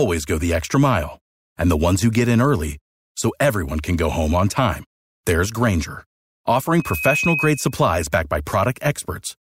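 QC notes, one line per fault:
6.77–7.82 s, loudspeaker feedback squeal: the microphone is picking up the loudspeaker it feeds, and at 2.5 kHz the round-trip gain of that loop rises above one, so that frequency reinforces itself on every pass. A single piercing tone swells over roughly a third of a second into a steady squeal that ends up at about the same level as the speech, then stops just before "backed by".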